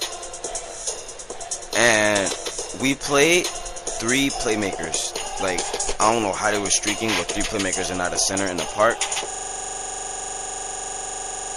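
From the start the sound is audibly damaged: the treble is cut off at a fixed point, the upper detail swirls and goes watery, and transients smear. This is MP3 compression, likely at a low bitrate around 64 kbps, where the encoder discards weak frequency content that then flickers on and off between frames.

At 8.46 to 8.48 s a brief glitch occurs, lasting about one frame. This is a corrupt frame decoded: damaged bits in that frame were played anyway, so the decoder placed energy at the wrong frequencies for its short duration.

From 9.31 s to the end, one 42.67 ms slice of audio repeats exactly, over fifty times, producing a machine-gun stutter at about 23.4 Hz. This is a system hang loop: the system stalled while the audio hardware kept replaying the same ring buffer, which fits a 2048-sample buffer.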